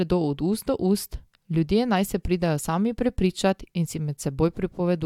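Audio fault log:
No faults detected in this speech recording.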